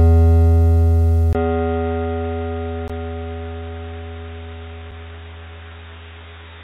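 Input switched to a poorer device, from 1.33 s to the end of this music clip. After a 20 ms silence at 1.33 s, everything above 3.8 kHz vanishes, so the music turns dull and boxy while its loudness stays about the same, and a faint new background noise sits well below it. This most likely comes from the recording input changing mid-take to a narrower-band microphone or a headset's call mode. A block of digital silence falls at 2.88 s, lasting about 17.4 ms, and a second at 4.91 s, about 5.8 ms long, which fits a 256-sample buffer. At each point the waveform drops straight to silence and returns with no fade, heard as a brief tick or hole. This points to the output buffer not being filled in time.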